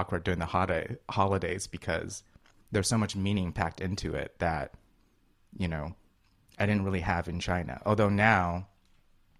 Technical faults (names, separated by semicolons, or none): none